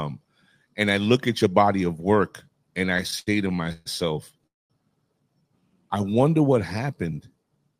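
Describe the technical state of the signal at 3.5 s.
At 3.5 s the signal sits inside a run of repeated stalls (stutter) spanning 2.97 to 3.88 s. Packets were arriving late, so the jitter buffer kept running dry, and the receiver stretched the last sound to cover each wait. Across that stretch there are ten such gaps, the longest 133 ms, totalling about 303 ms of filled sound, roughly a third of the span. Nothing is lost, but the speech drags and stutters.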